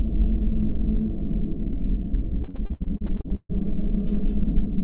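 A short recording of everyday sounds, passed through a call path whose G.711-style coding leaves nothing above 4 kHz, runs into repeated packet loss from 2.44 to 3.51 s. About a dozen holes, the longest 142 ms, are patched by stretching the preceding sound, so nearly half that span turns choppy and robotic. A spectrogram would show smeared, repeated frames and abrupt breaks, and the waveform would show recurring stutters there.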